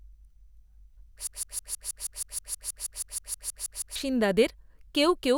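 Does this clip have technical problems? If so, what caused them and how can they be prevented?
Yes. From 1.27 s to 3.96 s the speech sticks in a broken-record loop: one 159 ms fragment repeats back to back 17 times, replacing the audio due then. A stalled player or stream likely kept resending its last buffer. A stall watchdog that resynchronises the stream prevents this.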